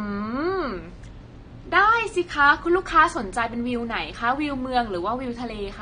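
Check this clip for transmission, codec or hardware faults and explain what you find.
The speech is marked by AAC compression artefacts from start to finish, plainly audible throughout. The top end is dull and the sibilants turn fizzy and warbling, likely from AAC-LC coding at a low bitrate that fits roughly 32 kbps. With so few bits, the encoder drops the upper band and quantises the remaining frequency lines coarsely, so detail smears. A spectrogram would show a hard cut-off ceiling and patchy holes in the upper bands.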